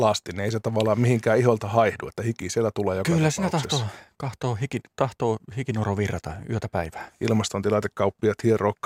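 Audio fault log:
4.69 s, block of digital silence: a single sharp tick in the speech, between "siinä tahtoo tahtoo" and "tahtoo hikinoro virrata yötä". About 0.67 ms of samples drop straight to silence and then return, with no fade at either edge. The two abrupt steps sit so close together that they merge into one click rather than an audible gap. The hole's length matches a small processing block, roughly 32 samples, left empty.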